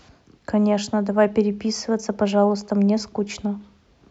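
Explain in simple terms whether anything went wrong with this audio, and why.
Nothing went wrong that a listener would notice, as the recording gave no sign of any problem on careful listening.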